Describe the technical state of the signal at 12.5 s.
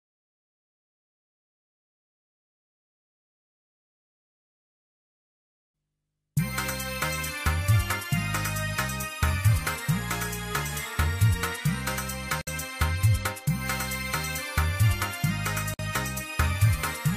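From 12.41 to 12.47 s the continuous sound drops out for 58 ms, with softened edges, then resumes where it stopped. This is a gap at a join of encoded pieces: separately encoded segments were joined untrimmed, so encoder start delay and end-frame padding remain.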